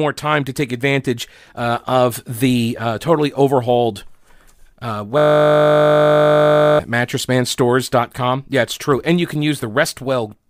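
At 5.18 s the speech gives way to a system hang loop lasting until 6.79 s. The playback side stalled while the audio hardware kept replaying the same 20 ms stretch of its buffer, around eighty times in a row. Repeating at 50 Hz, it sounds like a steady buzz. A waveform shows one identical 20 ms shape tiled end to end. A spectrogram shows evenly spaced horizontal harmonic lines at multiples of 50 Hz instead of moving speech formants.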